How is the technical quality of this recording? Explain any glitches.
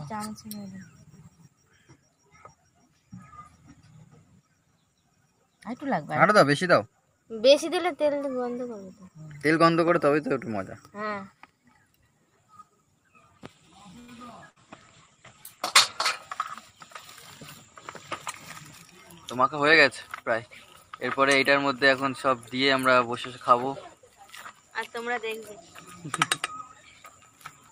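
Quality takes a few hits, all clustered in the middle and late part of the clip.

Short stall from a late packet, 13.99 to 14.11 s: a packet showed up late, the jitter buffer ran dry, and the receiver stretched the last bit of sound for about 87 ms. Nothing's lost, but you hear a held, slightly buzzy smear before it picks up where it left off.

Burst of packet loss, 14.50 to 14.59 s: a run of audio never made it in time. The receiver papered over roughly 60 ms with a fading continuation of the previous sound, then jumped ahead, so that stretch is simply gone.

Call bitrate drop, 14.54 to 16.24 s: right as that loss hits, the bandwidth estimate falls and the encoder goes from 48 to 16 kbps for about 1.6 s. The top end narrows from 20 kHz to 12 kHz, so it turns dull and a bit rough until it recovers.

Jitter buffer speed-up, 20.23 to 21.76 s: the buffer had built up extra delay and trimmed it by cutting tiny pitch-period slices, something like 70 ms in total. 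Playback runs about 5% fast at unchanged pitch, giving a subtly rushed feel.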